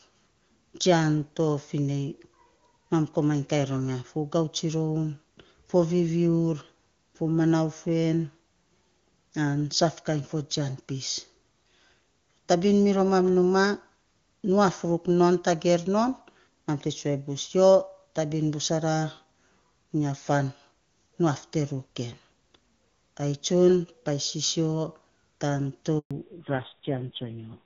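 A handover gap runs from 25.99 to 26.11 s: the call appears to switch networks, and for 120 ms no speech frames reach the listener. The sound dies away almost at once and stays silent until the new link picks up, so whatever fell in that window is lost.

A fallback to narrowband follows at 26.11 s and lasts to the end. The clear wideband sound that fits AMR-WB at its top rate gives way to a band with nothing above 4 kHz. That duller, rougher voice points to a low-rate narrowband codec, on the order of AMR-NB at 5.9 kbit/s.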